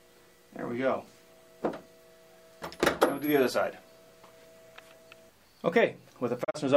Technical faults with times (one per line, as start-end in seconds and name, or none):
6.43-6.56 digital broadcast dropout